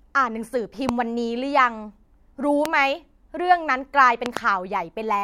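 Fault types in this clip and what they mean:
Loud pop: a sharp transient rides on top of the speech three times while the talking carries on underneath, a single pop at 0.9 s and another at 2.66 s, the second standing out most at roughly 20 dB above the signal, then a quick double pop between 4.26 and 4.39 s. The likely cause is a sudden voltage step or pulse, as from a plug, switch, static discharge or driver glitch, entering the chain and being shaped by the circuits after it.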